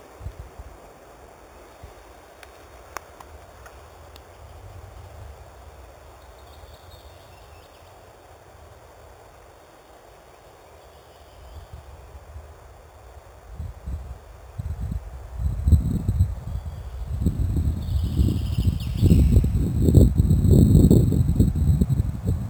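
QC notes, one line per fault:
Throughout: imaging from sample-and-hold upsampling. A bright metallic fizz about 29 dB below the signal follows its level, with the lowest mirror band at 4 to 8 kHz moving against pitch. This fits unfiltered sample repetition raising an 8 kHz rate to 48 kHz.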